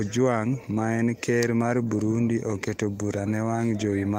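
A speech recording, with nothing technically wrong with it.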